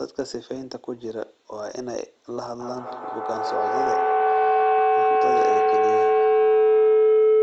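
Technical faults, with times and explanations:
2.6 s to the end, feedback howl: a tone around 400 Hz swells until it stands about 12 dB above the speech and never decays. A loudspeaker playing the same call is feeding back into a microphone, and each trip gains level, so the repeats grow and narrow to the loop's favoured frequency, with the loop repeating roughly every 150 ms. On a spectrogram it is a bright line near 400 Hz; the waveform swells into a dense block.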